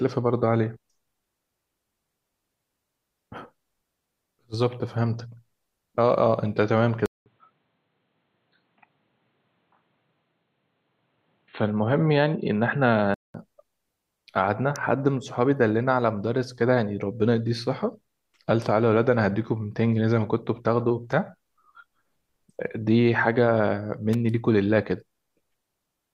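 At 7.06 s a 200 ms gap, then the speech goes dull and boxy with nothing above 4.2 kHz until 13.34 s. Likely the input switched to a poorer device, with its faint noise well below the speech. Sharp snaps at 14.76 s and 24.13 s sit on top of the audio, most likely electrical switching spikes picked up from something nearby.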